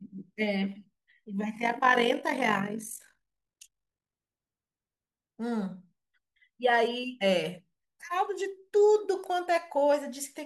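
Overlap-add ripple from 1.56 to 4.15 s: frames rejoin with uneven overlap gain, so the level pulses about 11 dB at around 50 Hz, a rough metallic buzz.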